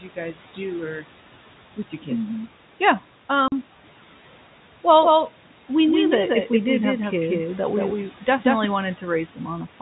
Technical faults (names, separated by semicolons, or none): packet loss filled with silence; doubled audio track